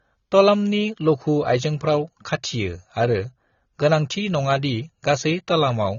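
Speech that carries audible AAC compression damage from start to finish. Nothing is present above about 7 kHz, so the sound is dull and the sibilants lack their top. The coding gives vowels a smeared, warbling texture and makes sibilants fizzy. This points to an encoder running short of bits. It trims the top band and coarsely quantises what is left. The likely cause is AAC-LC coding at a low bitrate, around 24 kbps.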